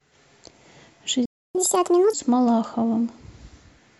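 At 1.25 s the speech cuts out into silence, and sound returns at 1.55 s, a gap of about 0.29 s. This is a playback stall, likely caused by the player running out of buffered data or its thread being blocked. What separates it from a dropout or a cut is that nothing is lost: the speech picks up exactly where it stopped, so the silence delays the audio rather than removing part of it.

From 1.55 s to 2.13 s the speech runs at 1.5 times normal speed, then snaps back. This is catch-up at higher speed: the player works through its backlog by resampling to recover the time lost in the stall. Because resampling changes speed and pitch together, the speech rises by roughly seven semitones, a chipmunk-like lift. A time-stretch speed-up would keep the pitch where it was, which is what separates the two.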